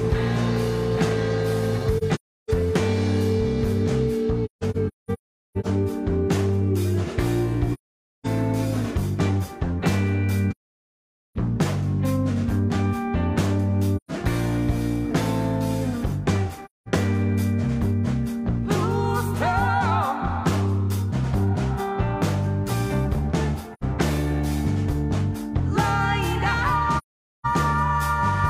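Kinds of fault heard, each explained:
AAC frame loss with muting: lost frames are decoded as silence. Sound fades out and in, leaving eight soft-edged holes between 1.97 and 27.46 s.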